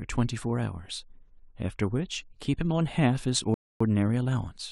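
At 3.54 s the speech halts in a rebuffering stall: the player exhausted its downloaded audio and waited for more, leaving about 0.26 s of silence until 3.81 s. Unlike a dropout, nothing is skipped; playback resumes exactly where it stopped, only delayed.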